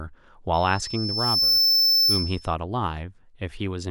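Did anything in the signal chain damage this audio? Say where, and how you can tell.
Yes. Loudspeaker feedback squeal in the microphone-to-speaker loop, 0.53 to 2.55 s: loop gain above one at 5.3 kHz builds a tone over about a second to roughly 10 dB over the speech.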